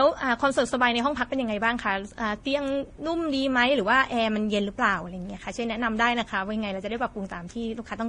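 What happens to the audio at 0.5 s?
At 0.5 s the speech carries the smeared, swirly quality of transcoding between lossy codecs, present throughout the clip rather than at that moment alone. It likely passed through a low-rate Vorbis stage and then a low-rate MP3 stage. The second encoder spends its bits on the first one's artefacts and adds its own, so two kinds of warble overlap. A spectrogram shows a hard ceiling with nothing above 10.1 kHz and patchy, flickering blocks below it.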